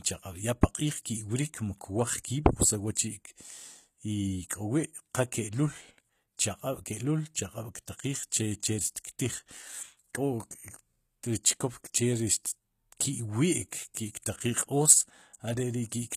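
Throughout the speech, the treble has a gritty, metallic quality and s sounds come across lispy, with nothing above 14.9 kHz. This is likely HE-AAC compression at a low bitrate around 20 kbps: the upper band is rebuilt by copying lower bands upward, so its harmonics do not line up.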